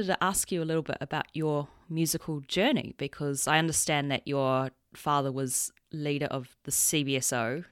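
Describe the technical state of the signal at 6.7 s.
At 6.7 s the speech signal is intact, with no fault audible at that moment.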